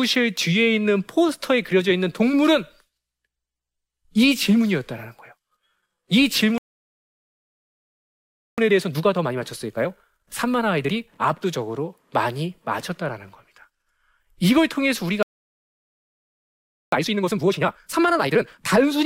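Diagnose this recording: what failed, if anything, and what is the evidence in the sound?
Speech drops to silence from 6.58 to 8.58 s and from 15.23 to 16.92 s. This is a playback stall, likely the player's buffer running dry.

Each gap is followed by hurried speech at normal pitch: 1.25 times speed until 11.58 s, then twice speed until 18.60 s. This is time-compressed catch-up trimming the player's backlog.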